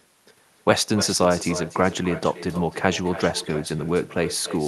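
Throughout the speech, every phrase is trailed by a quieter copy about a third of a second later. This is echo with no canceller. The far end's loudspeaker feeds its microphone, and nothing subtracts it. The copy sits about 13 dB down, and thin.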